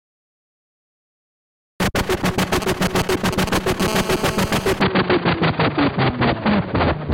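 From 2.39 to 3.82 s a galloping dit-dit-dit of brief 217 Hz buzzes cuts in, only a little quieter than the sound itself. These are GSM signalling bursts: a nearby 2G phone sending short groups of radio bursts, which the audio circuit rectifies into audible clicks.

At 3.88 s the pattern turns into a steady, hard, raspy buzz at 216.7 Hz, rich in harmonics and about 9 dB below the sound, lasting until 4.70 s. This GSM phone buzz comes from the phone holding a call and transmitting in bursts, 217 bursts a second.

From 4.81 s to the end the sound goes abruptly dull, with nothing above 4.7 kHz. There is no gap at the change and the level stays about the same. A new background noise sits roughly 30 dB below the sound. The likely cause is the input being switched to a poorer device with a narrower band and its own noise.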